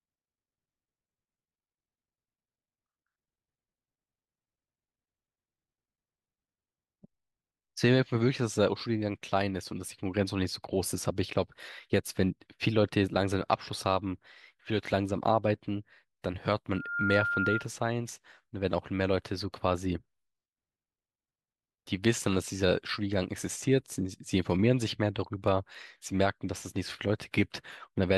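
From 16.71 to 17.69 s, a loudspeaker feedback squeal at 1.4 kHz swells over about a third of a second to a few decibels above the speech, showing as a bright horizontal spectrogram line.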